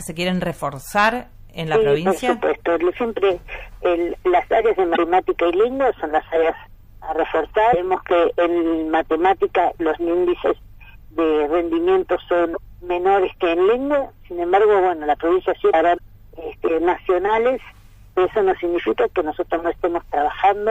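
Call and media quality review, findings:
Damaged data in compressed stream: short chirp/blip bursts at 4.93–4.98, 7.72–7.74, 12.53–12.58, 15.69–15.74 and 15.95–16.00 s, each about 20–55 ms. Decoder chokes on corrupt frames, loses sync and jumps to the next header.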